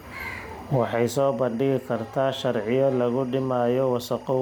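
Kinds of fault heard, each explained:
Timecode bleed: Linear timecode from an adjacent track or cable has leaked into the speech path. The code is a square wave that flips between two pitches, here near 1 kHz and 2 kHz, so it comes through as a continuous chirping warble sitting roughly 30 dB below the speech. It is present for the whole clip, and its regular rhythm fits 24-frame code.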